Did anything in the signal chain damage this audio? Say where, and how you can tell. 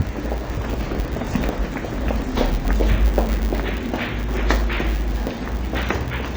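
Yes. At the codec stage, the lowest cut-off in the chain remains, and two different sets of coding artefacts are layered. This likely comes from transcoding between lossy codecs: low-rate MP3 then HE-AAC.

In the processing stage, a filter restarted on every block. It leaves a steady 100 Hz buzz throughout. Each block starts from silence, making a small transient that follows the level.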